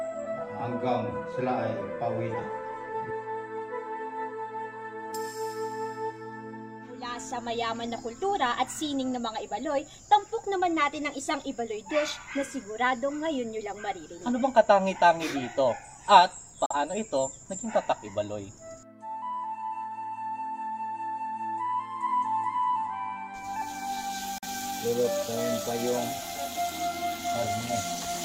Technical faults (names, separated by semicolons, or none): digital broadcast dropout